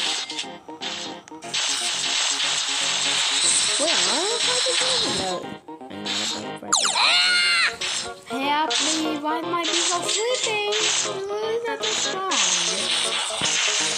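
At 11.98 to 12.00 s a single loud pop lands on top of the sound, peaking roughly 10 dB above it. It is most likely a voltage pulse from a plug, switch, static discharge or driver glitch that entered the signal path and was shaped by the circuitry after it, heard as a sharp pop. Unlike a dropout or a digital glitch, the underlying sound carries on uninterrupted beneath it, and there is just one pop.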